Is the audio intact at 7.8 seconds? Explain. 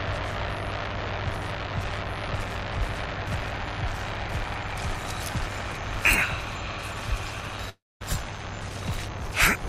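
No. At 7.8 seconds the sound sits inside a long network dropout running from about 7.69 to 8.02 s, most likely caused by audio failing to arrive. Roughly 0.32 s of material is lost. The player stretches the last sound into a fading buzz, which is heard as a smeared tail that dies away to silence or a faint hum. On a waveform the envelope tapers to a flat line. A spectrogram shows blurred, decaying bands, then an empty gap before the sound resumes.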